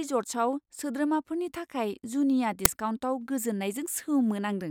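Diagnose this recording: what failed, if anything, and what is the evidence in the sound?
The failure is in the driver or buffer stage: an uninitialised buffer. At about 2.65 s the speech is interrupted by a sharp, loud crack lasting around 5.8 ms, which fits a 256-sample buffer. What happened is that a block got handed to the output before anything had been written into it, so whatever junk was sitting in that memory played out as if it were samples.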